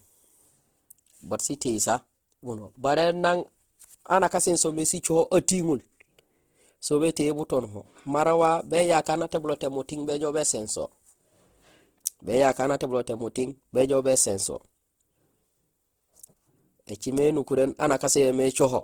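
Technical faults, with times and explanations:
Throughout, Opus compression: the speech sounds grainy, rough and plainly noisy across its whole range, yet stays full-band with content up to about 20.2 kHz. This is likely the Opus music (CELT) mode starved of bits, consistent with a rate near 16 kbps. It refills the bands it cannot code properly with folded copies of lower bands or with noise. Unlike MP3, it leaves few spectral holes, so the sound turns rough rather than swirly.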